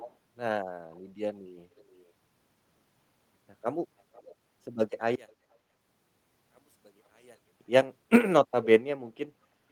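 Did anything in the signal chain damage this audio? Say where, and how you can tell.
Yes. Echo leak at 0.0–0.14, 0.95–1.0, 1.76–2.06, 4.14–4.35, 5.29–5.33 and 8.63–8.67 s: faint copies of the speech trail by roughly 0.47–0.49 s, about 20–40 dB down, likely from a far-end echo canceller in call processing letting its loudspeaker pickup through.

One channel inverted from 5.15 to 7.61 s: the speech collapses by about 31 dB when the stereo channels are summed, likely because reversed polarity on one side cancels the centred sound.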